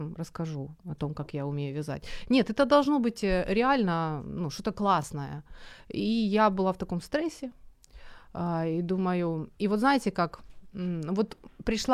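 At 5.02 s there is a Bluetooth stutter. The link failed to deliver audio in time, so the receiver filled the gap by replaying its last buffer. About 14.5 ms of speech goes missing, which fits a single lost packet. The result is a brief repeated slice, heard as a tiny hiccup or catch in the speech. When new data arrives, the audio resumes further along, as though it had kept playing through the gap.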